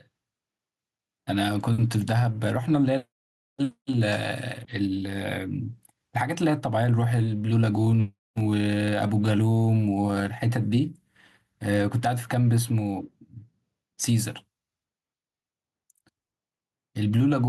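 Gain pumping runs through the whole speech clip. The level never settles. The swing is around 10 dB. Loud and quiet passages sit close together, so the sound feels squashed and breathless. The likely cause is input gain set far too high, with a fast limiter or compressor clamping down on every loud moment.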